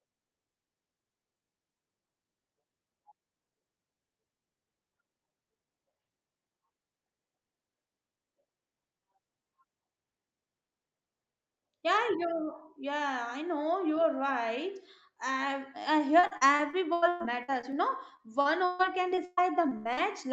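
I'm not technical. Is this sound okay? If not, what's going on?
No. Near the end, from 16.19 to 17.75 s and again from 18.17 to 19.99 s, the speech turns choppy and robotic. This is repeated packet loss: small chunks of the call's audio went missing again and again, ten times in the first stretch and nine in the second, each up to about a seventh of a second. The call software filled every hole by stretching the last sound it had, which gives the robotic sound. A single dropout would be one clean gap; this is a rapid string of them.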